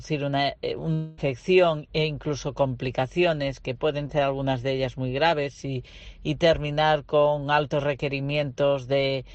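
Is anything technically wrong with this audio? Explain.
Yes, there are two network-related faults.

From 0.93 to 1.19 s there is a long network dropout. For about a quarter of a second, the original audio is replaced by a continuation of the preceding sound that turns into a fading buzz or hiss. The whole gap is filled this way, with no stretch of pure silence. The likely cause is a run of packets that never arrived, which the receiver concealed by extending what it last had. When the real audio resumes, the missing portion is gone rather than delayed.

At 4.07 to 4.11 s there is a short concealed packet loss. Roughly 20 ms of audio failed to reach the decoder in time. The receiver patched the hole by extrapolating the last sound for about 15 ms and then cross-fading back into the real signal. The result is a brief smear or wobble.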